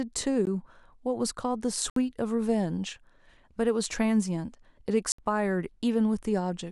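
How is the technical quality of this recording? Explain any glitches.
The speech is broken by three dropouts, each a block of digital silence. The first, at 0.45 s, lasts about 16 ms. The other two, from 1.90 to 1.96 s and from 5.12 to 5.18 s, each last 64 ms. In each case the sound cuts straight out and returns with no fade, which fits an output buffer that was not filled in time. The short first gap sounds like a tick. The two longer ones are brief holes.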